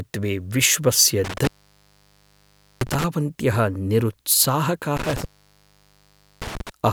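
At 1.24 s the speech is broken by an intermittent contact that runs to 3.04 s, with the line fully open for about 1.3 s. A second one follows from 4.97 s to 6.70 s, open for about 1.2 s. A loose plug or cable loses connection, so the signal vanishes with crackle at each break and remake, and faint hiss is left in the gap. That scratchy edge and residual hiss set it apart from a clean digital dropout, which falls straight to silence.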